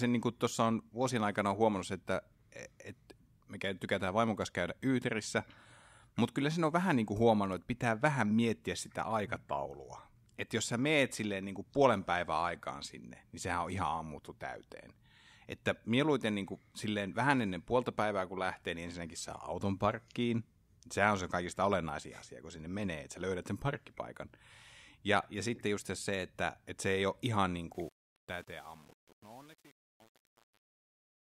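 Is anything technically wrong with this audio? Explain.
Yes. From 27.74 s to the end at 31.39 s, just after "ei ole ihan niin", the fade-out shows truncation distortion. The fade stage keeps only about 8 bits without dither, so the shrinking speech waveform collapses into coarse square steps. The tail turns gritty, unlike a clean fade or a noise gate's abrupt cut.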